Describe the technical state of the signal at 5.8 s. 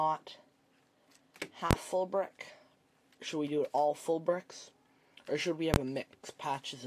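Invalid numbers at full scale occur from 5.74 to 5.76 s, just before the moment asked about. A calculation produced infinite or invalid values that were pinned to maximum amplitude for one processing block, which fits a 1024-sample buffer. The block is about 21 ms long, so it is heard as a single loud bang rather than separate pops.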